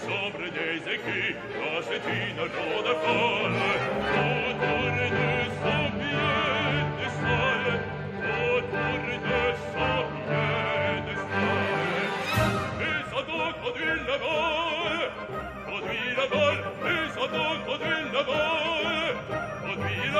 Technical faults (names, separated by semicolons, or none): none